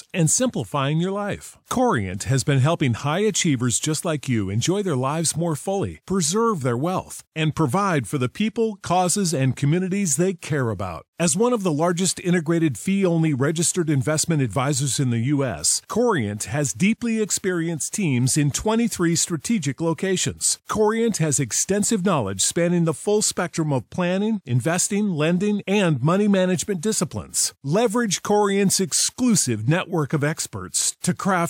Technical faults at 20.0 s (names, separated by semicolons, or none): none